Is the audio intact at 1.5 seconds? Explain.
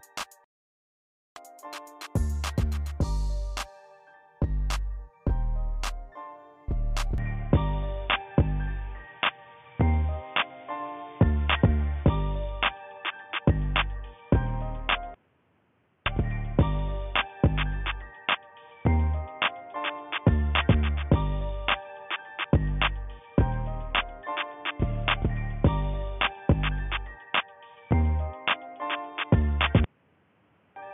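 Yes, the audio at 1.5 seconds is intact, with no dropout, click, distortion or other fault at that moment.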